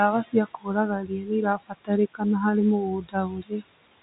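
Speech, heard over a telephone-band line with nothing above about 3.8 kHz, and the noise suppressor is working it too hard. The room noise, sitting about 18 dB under the voice, gets pushed down by about 19 dB throughout, so noise suppressor artifacts show up as pumping between phrases. Worse, the suppressor is mistaking parts of the speech for noise. Speech cut by the noise suppressor happens from 0.11 to 1.92 s (roughly a second of it, dips up to about 21 dB), 2.14 to 2.45 s (about 17 dB), and 2.79 to 3.63 s (about 22 dB). In those spans, soft consonants and endings sound swallowed.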